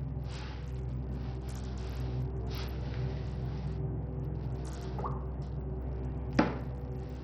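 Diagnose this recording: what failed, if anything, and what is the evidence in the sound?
Codec stage, likely Bluetooth SBC compression near 64 kbps: throughout, starved top sub-bands make the treble flicker and drop out under gritty aliasing.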